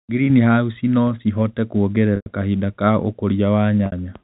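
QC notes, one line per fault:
2.16 to 2.26 s and 3.86 to 3.92 s, packet loss with pitch repetition: about 100 ms drops out just before "kahinda ka", which fits five 20 ms packets. A 60 ms gap near the end fits three. Each time the receiver keeps repeating the last pitch period, so you hear a brief buzzy hold that fades away over roughly 50 ms, then a quick cross-fade back in. The G.711 telephone band stays underneath all of it.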